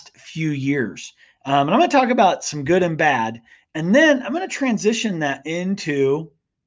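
No technical faults can be heard anywhere in the speech recording, and the signal stays steady and continuous throughout.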